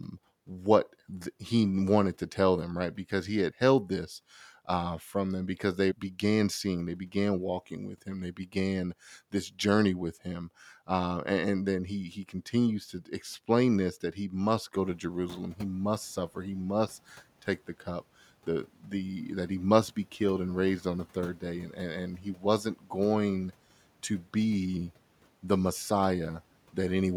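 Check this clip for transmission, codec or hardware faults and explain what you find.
One fault is present: speech cut by the noise suppressor, at 22.18–22.43 s and again at 22.64–22.91 s. The suppressor treated brief parts of the speech as noise and turned them down with the background, by about 10 dB and about 12 dB. Roughly 100 to 150 ms in each span sounds swallowed and faint. The room noise, which rises by about 14 dB around 15 s, stays about 25 dB below the speech.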